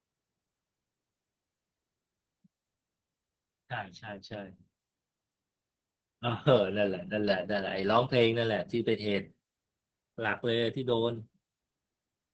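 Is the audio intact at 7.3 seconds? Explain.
No. At 7.3 s, as throughout the clip, the speech carries heavy Opus voice compression. Its linear-prediction coder, pointing to about 10 kbps, coarsely codes the excitation and cuts the band near 8 kHz, so speech sounds hoarse and slightly robotic. A simple low-pass filter would only muffle it.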